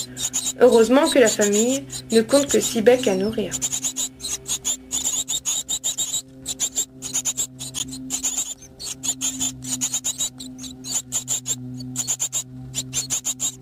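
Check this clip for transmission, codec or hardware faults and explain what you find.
A corrupt frame decoded fault occurs three times. At 0.71 s a single frame goes bad. From 3.29 to 3.34 s the damage covers a few consecutive frames. From 7.79 to 7.81 s another single frame is hit, and it is much louder, peaking near -10 dBFS against roughly -25 dBFS for the first two. In each case the decoder played frames with flipped bits, so misread gains and codes placed energy at wrong frequencies. The result is a brief chirp or noisy blip rather than the gap or smeared fill of a lost frame.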